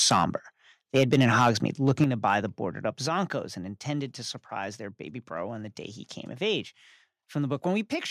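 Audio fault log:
0.11 to 0.24 s, 0.95 to 1.5 s and 1.88 to 2.34 s, microphone overload: the loudest peaks sound harsh and crackly, likely from input gain set too high so the tops flatten against the converter ceiling. The first two push about 7 dB over, clipping a few percent of samples. The last, just before "the boarded up", is milder at about 3 dB.
1.03, 2.04, 3.06 and 7.86 s, microphone volume stepped down: the level drops abruptly each time, likely the call software cutting mic input after hearing it run hot. The cuts are about 2, 7, 4 and 2 dB. The one at 3.06 s sits between "the boarded up" and "and intended to surprise".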